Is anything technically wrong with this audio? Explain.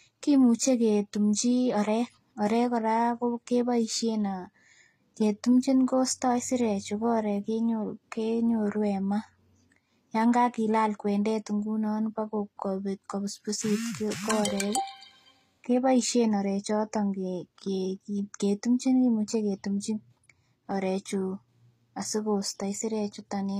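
Yes. Throughout the speech there is transcoding between lossy codecs: nothing above about 14.9 kHz, plus two different sets of artefacts layered together. The second encoder spends its limited bits on the first one's smearing and adds its own metallic swirl and watery high-band. That mix points to a likely chain of Vorbis at around 64 kbit/s into HE-AAC at around 24 kbit/s. A single codec would give only one consistent artefact character.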